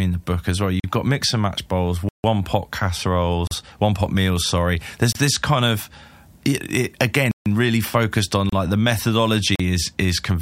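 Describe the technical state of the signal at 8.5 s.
At 8.49 s the speech drops into a block of digital silence lasting about 31 ms, ending at 8.53 s. The span is silent, entered and left without any fade, and the gap is heard as a brief hole.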